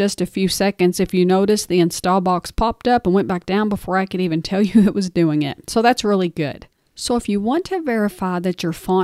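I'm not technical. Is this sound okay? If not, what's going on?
Yes, this sound is okay. Nothing in it needs fixing.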